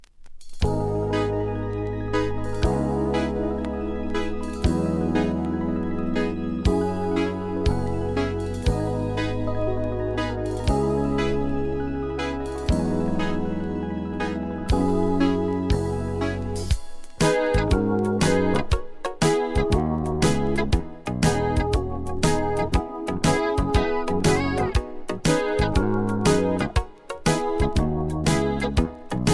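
Nothing goes wrong with the sound here at any point, so there's no technical fault to point out anywhere along the way.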